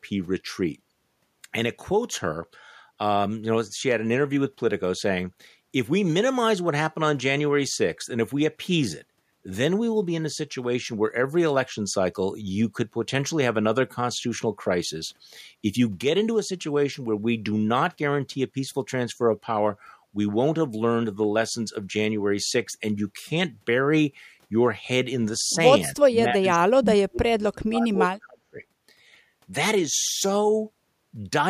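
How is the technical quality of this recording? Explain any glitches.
There's one real glitch, from 25.97 to 28.61 s: speech suppressed in double talk. Across that stretch the speech dips and breaks up in pieces, adding up to about two seconds of lost level, with the deepest cuts around 40 dB, close to silence. The likely cause is both ends talking at once, leaving the echo canceller unable to tell the local talker from the loudspeaker echo, so it clamped down on everything.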